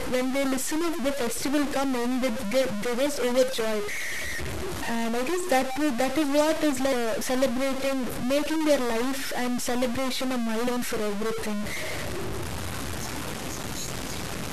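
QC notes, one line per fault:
Throughout, stuck bit: a distortion rides on all the speech, and the pauses are filled with a gritty noise rather than silence. This points to a data bit likely held fixed in the converter or its wiring. Unlike clipping, the grit persists even at low levels.
10.67 s, audio missing between chunks: just before "for everything", roughly a third of a second of speech vanishes and the two sides butt together with no gap. That fits a piece dropped at a boundary between 4-second processing chunks. A dropout would leave silence instead, but here the material is simply gone.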